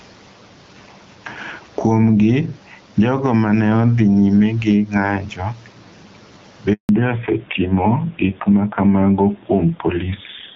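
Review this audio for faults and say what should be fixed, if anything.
Gain pumping runs through the whole clip, with a gain swing of around 10 dB. The room noise sits normally about 39 dB below the speech. The likely cause is a mic gain set far too high, with a fast limiter clamping down on every peak and squashing loud and soft parts together. Drop the input gain so the limiter rarely has to act.

There's a handover gap at 6.73 s. The speech fades out within a few tens of milliseconds and stays silent until 6.89 s, a 160 ms hole. That's the phone switching networks mid-call with no speech frames arriving during the switch, so whatever was said in that stretch is simply gone. Better network coverage, or handover settings that keep frames flowing during the switch, would avoid this.

Right after that gap, from 6.89 s to the end, there's a fallback to narrowband. Everything above 4 kHz disappears and the speech turns duller and rougher. 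Before the switch, the AMR wideband (HD Voice) codec sounds clean with only light coding damage, which fits 12.65 kbit/s. Afterwards the sound points to narrowband AMR at around 7.4 kbit/s. Making sure both networks support HD Voice would keep the call wideband across handovers.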